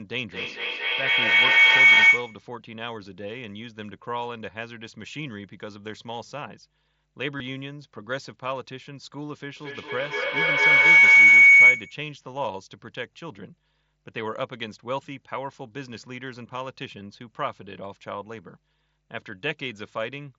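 A steady 50 Hz mains hum runs under the whole recording at about 30 dB below the speech. A ground loop or a nearby transformer is coupling the power line into the signal path, leaving a constant low tone beneath everything.

From 0.3 to 2.54 s a feedback howl builds as two devices in the same room on one call form a microphone-to-loudspeaker loop that gains level on each pass. The repeats narrow to a howl near 2 kHz that pulses roughly every 200 ms and peaks about 17 dB above the speech.

Within that howl, at 1.95 to 1.97 s, concealed Bluetooth headset packet loss replaces about 22.5 ms of lost audio between headset and phone with a repeated stretch of recent waveform. It is a brief buzzy hold with a slight warble as real audio resumes. The same artefact returns at 7.38 to 7.40 s, again about 22.5 ms long.

A second feedback howl runs from 9.57 to 12.12 s, with the same 2 kHz tone and roughly 200 ms pulsing, now peaking about 19 dB above the speech.

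Inside it, from 10.99 to 11.03 s, a longer packet-loss gap of about 45 ms is filled in. Here the held buzzy tone lasts longer before the warble where audio returns.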